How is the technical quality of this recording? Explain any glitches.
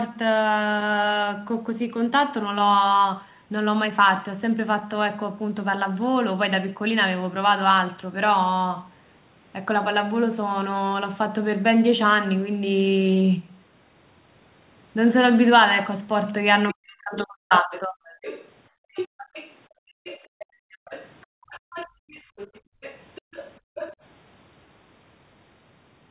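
The recording has clear echo-canceller trouble in its second half, from about 16.7 s to 24 s. The speech is band-limited to 4 kHz throughout, which fits a narrowband G.711 call path.

Other side's voice leaking through: From 16.68 s to 23.96 s, a second voice sits underneath the main talker, roughly 15 dB lower. This is likely loudspeaker playback that the echo canceller failed to fully remove before it reached the microphone.

Speech suppressed in double talk: Between 16.73 s and 18.02 s, the main talker dips sharply in pieces, at worst by around 40 dB, for about a second in total. Both ends were talking at once, and the canceller most likely mistook the talker for echo and turned everything down.

Background gated by the echo canceller: The room sound drops out at 18.70–18.94 s (about 33 dB), then within 19.68 s to 22.81 s (about 40 dB, roughly 1.5 s in total), and again at 23.60–23.75 s (about 40 dB). 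Each time, the canceller clamped the microphone while the loudspeaker played, then released it.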